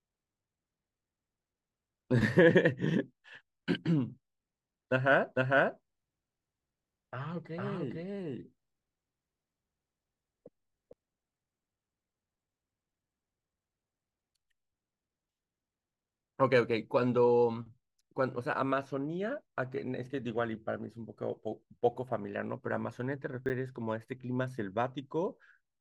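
From 5.35 s to 10.93 s a doubled audio track is heard: a second full-band copy of the speech trails the original by roughly half a second at about the same level. It has no decay or room colour and starts and stops abruptly, likely from a second, slower capture path.

At 23.46 to 23.50 s, chunks out of order produce a brief garbled moment. A 10 ms chunk plays three chunks late, after the audio meant to follow it, leaving three hard joins but losing nothing.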